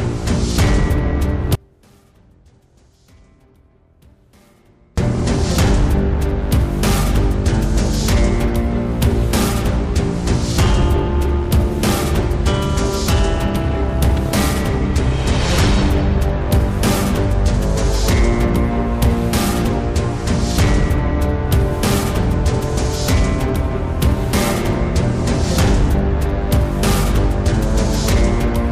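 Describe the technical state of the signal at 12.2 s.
At 12.2 s the signal is intact, with no dropout, distortion, glitch or other fault audible at that moment.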